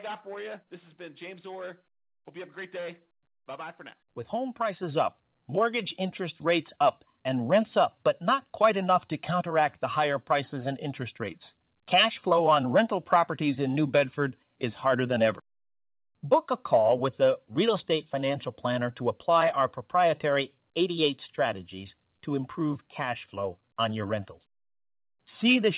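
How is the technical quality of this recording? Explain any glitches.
The recording has two jumps in level, and it comes through a narrowband call path with nothing above 4 kHz, which fits G.711 telephone coding.

Microphone volume stepped up at 4.83 s by about 5 dB, then again at 5.85 s by about 3 dB, just before "interest rates up". The call software judged the mic too quiet and raised the input gain, so voice and background both jump louder at once.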